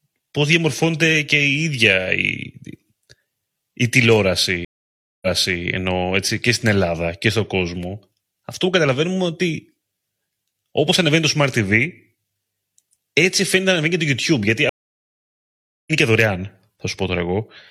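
At 4.65 s the speech drops out in a stream reconnect: the connection broke, the player sat silent for about 0.57 s, then reopened the stream with a fresh decoder. It resumes on "ενώ έτσι και στην" about 0.42 s earlier than where it cut, so that stretch repeats. At 14.69 s a second reconnect gives roughly 1.18 s of silence, and the speech comes back around 0.7 s later, skipping material. Each restart opens muted or fading in.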